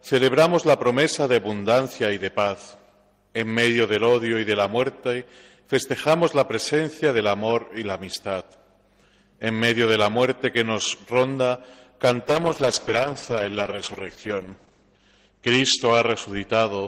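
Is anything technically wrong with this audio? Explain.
Yes. From 12.28 s to the end there is a call bitrate drop. The bandwidth estimate fell and the codec was forced into far fewer bits, which fits a fall from 32 to 10 kbps. The top end narrows from 20 kHz to 8 kHz and the sound turns coarse and watery, bottoming out for 2.56 s. Unlike packet loss, there are no gaps or glitches. Unlike a plain low-pass filter, the texture itself degrades.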